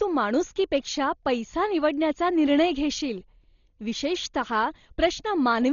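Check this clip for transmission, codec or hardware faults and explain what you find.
The clip shows one codec fault throughout its length, most likely Dolby Digital compression at a starved bitrate. The damage is consistent with roughly 32 kbps. At that rate the encoder narrows the coded band and leaves many frequency lines without mantissa bits, so the decoder fills those gaps with dither noise. The speech therefore sounds dull, with nothing above 7 kHz, and heavy codec damage appears as a rough, fluttering noise clinging to the voiced tones.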